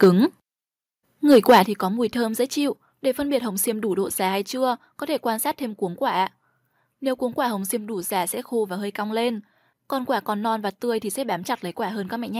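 Right at the start, 0.02 to 0.08 s, there's microphone overload, peaks flattened at the converter's ceiling, most likely from input gain set about 6 dB too hot, so it crackles harshly. The microphone volume steps down about 3 dB at 0.04 s. Overload returns from 1.31 to 1.6 s, then at 1.65 s, just before "có mùi thơm dễ", another step drops everything about 9 dB, likely call software reacting to the clipping.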